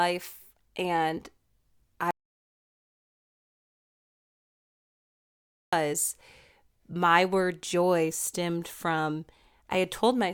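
At 2.11 s the speech cuts to dead silence, with no room tone, until 5.73 s. This audio dropout to silence likely reflects lost input.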